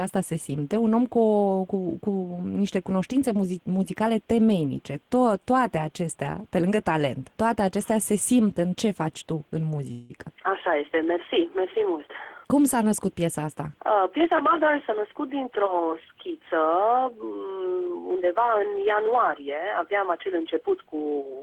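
A call audio freeze occurs from 9.91 to 10.18 s. The last sound is stretched into a brief fading buzz for about 183 ms and then continues from where it stopped. Nothing is lost, but everything after it lands about 183 ms later. This is likely caused by delayed packets draining the jitter buffer.

Jitter buffer speed-up follows at 13.91 to 15.35 s, running about 7% fast, and again at 20.89 to 21.35 s at about 14%. After the backlog, the receiver cuts short pitch-period slices, roughly a tenth of a second and then less. The sound hurries while its pitch stays unchanged.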